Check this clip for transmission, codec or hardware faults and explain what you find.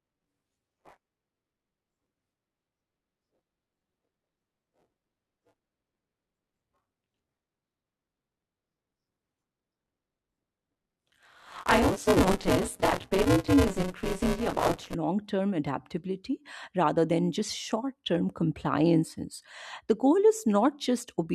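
One fault is present. From 0 to 14.9 s the speech carries a robotic 188 Hz buzz. This is buffer tearing: write and read pointers cross each 256-sample period, splicing in stale audio.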